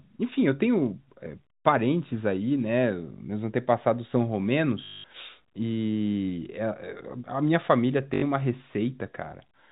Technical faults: packet loss with last packet repeated

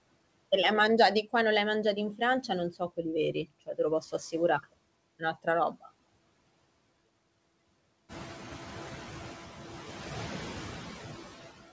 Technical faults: noise suppressor artifacts; speech cut by the noise suppressor

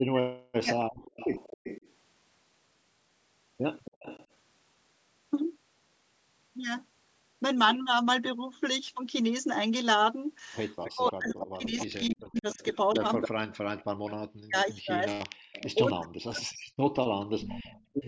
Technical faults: speech suppressed in double talk; background gated by the echo canceller; echo leak

